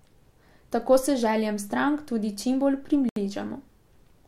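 At 3.09 s, just after "željam strank tudi čimbolj", the speech drops to silence for about 73 ms, then resumes: likely a Bluetooth stall, buffer emptied while packets were resent.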